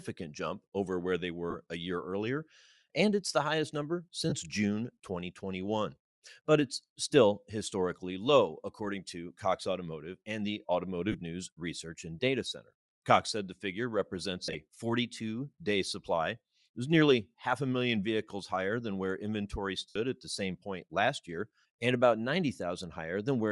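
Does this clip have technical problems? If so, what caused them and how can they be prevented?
Yes. Throughout the speech there is a breathy, grainy edge on the upper frequencies, where detail has been replaced by hiss-like fill. The likely cause is Bluetooth LC3 compression at about 48 kbps with short 7.5 ms frames. The upper spectrum is partly zeroed and then noise-filled, which is why it sounds granular rather than dull or swirly as with older codecs. Raising the LE Audio bitrate or quality preset would prevent it.

There are also brief noisy smears of lost LE Audio frames at 1.50 s (about 38 ms), 4.30 s and 11.12 s (about 23 ms each), 14.44 to 14.55 s (68 ms of loss scattered over 105 ms, the longest run roughly 40 ms), and 19.89 to 19.96 s (68 ms). The decoder repeats the last spectrum with scrambled phase, so the gaps sound like a grainy blur instead of the silent holes or clicks of ordinary dropouts. 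Keeping the devices close and reducing 2.4 GHz interference would prevent these losses.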